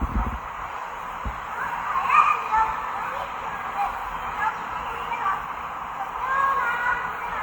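A recording of sounds, with two different kinds of coding artefact layered on each other throughout, with content extending up to 20 kHz. This is likely transcoding between lossy codecs: a low-rate Opus-style encode, fitting about 32 kbit/s, re-encoded to WMA at around 96 kbit/s, whose bits are spent on the earlier damage.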